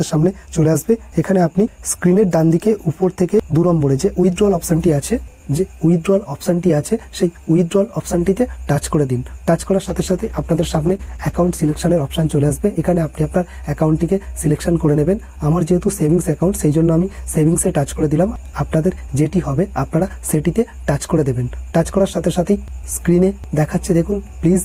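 At 9.9 s a call bitrate drop begins and lasts until about 12.97 s. The bandwidth estimate has fallen, so the encoder gets far fewer bits. The audio is coded coarsely and its high frequencies are cut away. It turns rough, watery or muffled. The degradation fits a fall from 64 kbps to about 13 kbps. The worst stretch holds for about 1.5 s. The bitrate then recovers, and the sound clears.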